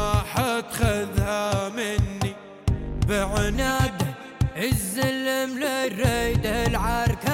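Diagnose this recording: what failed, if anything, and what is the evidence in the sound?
From 3.55 s to the end at 7.33 s, a section at the wrong speed runs 1.13 times fast, lifting pitch about two semitones, likely from an edit or playback stage using the wrong clock. A spectrogram shows every harmonic stepping upward together at 3.55 s, with compressed waveform timing.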